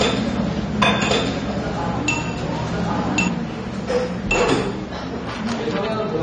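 A doubled audio track runs from the start to 3.28 s, already under way when the clip opens. A second copy of the same sound trails the first by about a second, at roughly the same level, so every event is heard twice. The copy is full-band, with no decay or room colouring, and it cuts off abruptly at 3.28 s. The likely cause is the sound being captured again through a slower path, or an edit leaving two out-of-step copies.

AAC compression damage is plainly audible throughout the clip. Nothing reaches above 9 kHz, so the sound is dull and lacks air. The remaining spectrum has a smeared, warbling texture, and sibilant or noisy detail turns fizzy where the encoder has thinned or filled bands. This is likely the work of an AAC-LC encoder running at a low bitrate, which fits about 32 kbps, quantising coarsely and lowering its cut-off.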